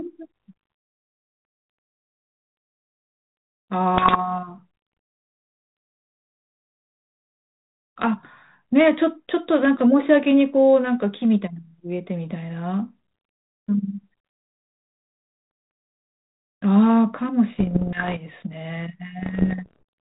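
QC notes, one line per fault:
3.95–4.19 s, 17.56–18.20 s and 19.22–19.83 s: bit errors on an ADPCM link. Pops and rough bursts with brief level jumps; each flipped bit corrupts the decoder's step size and predictor, so damage rings on for milliseconds. Error rate roughly 1% at first, falling to about half that.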